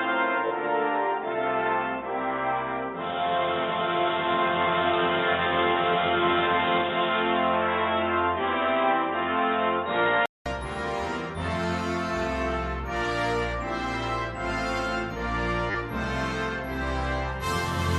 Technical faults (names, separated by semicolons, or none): input switched to a poorer device; repeated frames